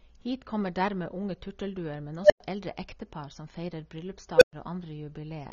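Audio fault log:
Throughout: AAC compression. The speech sounds dull and smeared, with a warbling, fizzy texture on sustained vowels and sibilants, and the upper spectrum is thin and patchy. This is likely low-bitrate AAC-LC coding, consistent with roughly 24 kbps. At that rate the encoder lowers its cut-off and starves quieter bands of bits, leaving spectral holes or substitute noise that shift from frame to frame.
2.23–2.40 s and 4.36–4.53 s: unstable filter. Each event is a tone that swells rapidly to a clipped squeal. The first sits around 700 Hz and builds over 73 ms. The second sits around 500 Hz and builds over 54 ms. Each squeal cuts to silence, about 104 ms after the first and 116 ms after the second. A recursive filter with bad coefficients is feeding back on itself until its output overflows, then stays muted until it resets.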